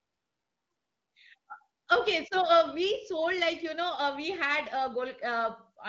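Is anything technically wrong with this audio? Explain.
No, nothing is technically wrong.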